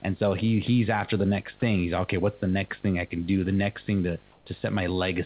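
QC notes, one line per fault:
Throughout: video or display buzz. A steady 50 Hz buzz with hash above it, plus a 15.6 kHz whine at the line rate, sits roughly 30 dB under the speech. It is picked up from a screen or video cable coupling into the audio.
1.60–1.62 s: sound dropped by the voice detector. About 10 ms of speech vanishes within a 20 ms stretch of flat synthetic noise. The likely cause is the sender's voice detector briefly mistaking the speech for background and halting transmission.
4.32–4.46 s: comfort noise in place of the background. For 140 ms the real room background, about 36 dB below the loud parts, turns into smooth, featureless hiss about 1 dB quieter. The likely cause is discontinuous transmission, with the receiver synthesizing noise during the pause.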